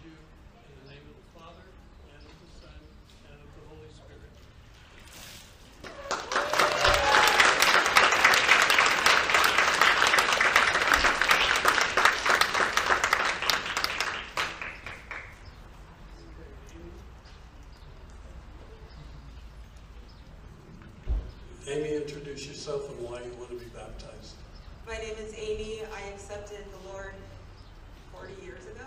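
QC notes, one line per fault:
6.60–10.56 s: hard clipping, peaks driven about 11 dB past the ceiling and cut flat, adding high harmonics heard as harsh fuzz on loud passages.
13.50–13.84 s: hard clipping again, about 10 dB over, a brief burst of flattened peaks giving the same gritty, buzzy distortion.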